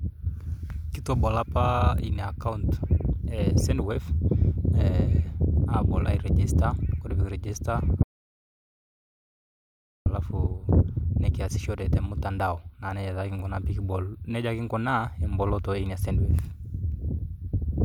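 A speech recording with an audio dropout to silence from 8.03 to 10.06 s: the sound cuts off mid-flow and roughly 2.03 s of silence follow, with no room tone, before it resumes abruptly. This likely reflects a momentary loss of the input signal.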